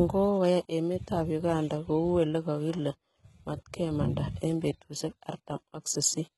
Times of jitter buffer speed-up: none

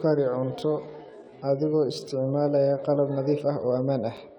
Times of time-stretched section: 0.00-3.06

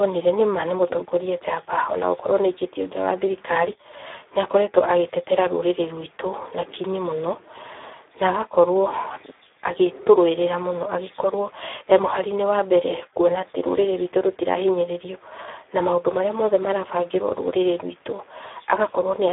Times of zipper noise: none

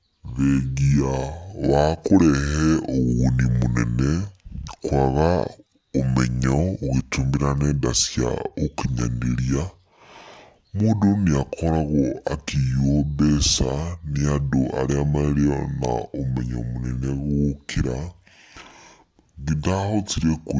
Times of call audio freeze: none

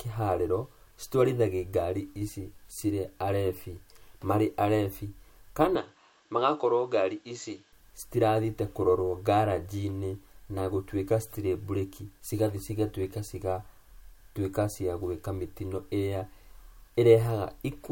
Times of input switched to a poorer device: 5.75-7.73

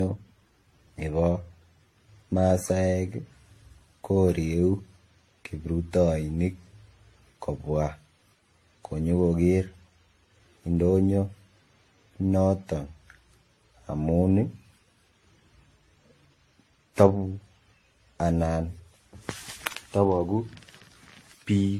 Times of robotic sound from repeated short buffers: none

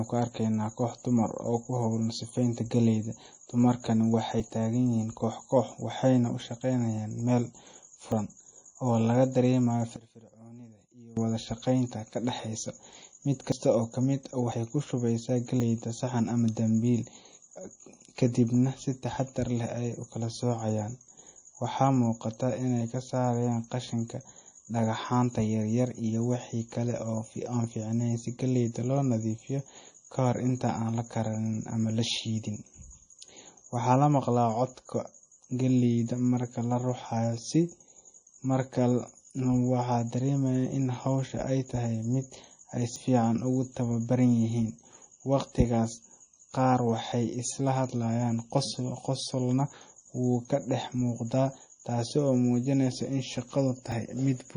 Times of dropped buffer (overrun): 4.40, 8.12, 13.52, 14.52, 15.60, 42.96, 47.12, 53.92

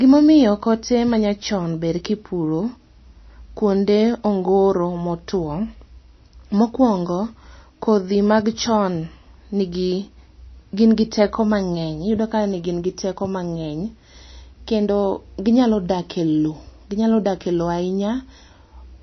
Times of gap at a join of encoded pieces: none

